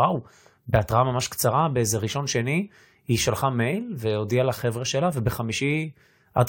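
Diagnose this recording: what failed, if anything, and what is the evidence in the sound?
The overlap between stream segments happened at the playback stage, where segments are joined. At 5.12 s the speech jumps as about 16 ms of sound is skipped. Overlapping timestamps at a segment boundary, which fits 6-second segments, made the player trim sound that was never duplicated.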